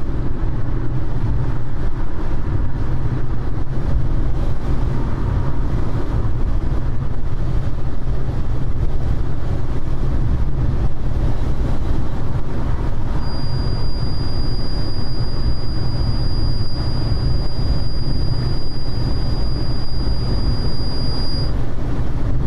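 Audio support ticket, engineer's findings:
Feedback whistle, 13.15 to 21.56 s: thin steady tone near 4.8 kHz, well below the main sound, swelling and fading slowly in level. Likely a speaker-to-mic loop parked right at the feedback threshold, ringing at one frequency without running away. Check monitor placement and mic gain.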